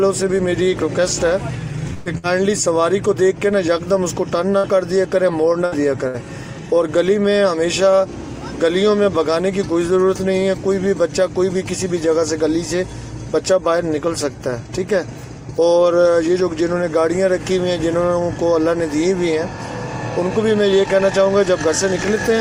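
Five bursts of packet loss occur between 1.93 and 6.17 s: at 1.93–2.09 s, where about 120 ms of audio is missing, and at 2.18–2.26, 4.57–4.66, 5.65–5.75 and 6.08–6.17 s, each losing about 60 ms. At each burst the receiver extends the last received sound and fades it, producing a brief held buzz or decaying hiss. The audio then resumes further on, with the lost section skipped.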